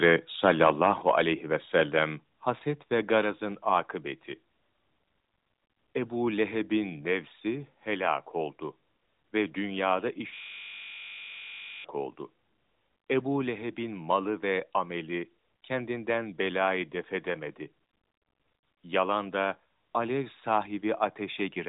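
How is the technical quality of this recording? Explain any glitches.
The recording has a few real glitches: two bursts of distortion, two sudden level drops, and a buzzing stall partway through. It all comes through a narrowband AMR-style mobile path that cuts everything above about 3.8 kHz.

Microphone overload hits from 0.44 to 1.21 s, roughly 10 dB too hot, and again briefly at 3.14 to 3.18 s, about 3 dB over. The peaks are likely flattening against the converter's ceiling, which gives the speech that harsh, crackly edge.

Microphone volume stepped down during the first burst and right after the second, at 1.02 s by about 5 dB and at 3.24 s by about 3 dB. Everything drops abruptly, likely because the call software spotted the clipping and turned the input gain down.

A system hang loop runs from 10.34 to 11.84 s. A 20 ms slice repeats over and over, so you hear a steady 50 Hz buzz. 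That's the sound hardware cycling one buffer while the machine stalls.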